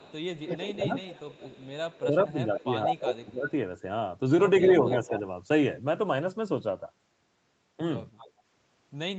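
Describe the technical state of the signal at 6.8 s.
At 6.8 s the speech comes through intact, with no fault present, only the band limit to about 8 kHz that the call's microphone processing and Opus codec impose throughout.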